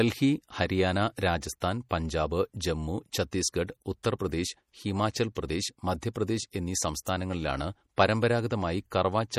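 Throughout, the speech has plainly audible watery, swirling coloration with nothing above 20.8 kHz, likely MP3 compression at a low bitrate, which fits about 48 kbps. At 5.35 s, just before "പ്രദേശ് മധ്യപ്രദേശ് എന്നീ", and again at 7.05 s, just after "ഹിമാചൽ പ്രദേശ് മധ്യപ്രദേശ് എന്നീ", pre-echo places a brief hiss of about 15 ms ahead of an attack, softening its onset.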